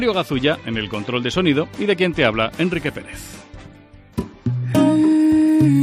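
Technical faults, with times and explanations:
No technical faults can be heard anywhere in the clip. Nothing in the audio calls for a time, a fault name or an explanation.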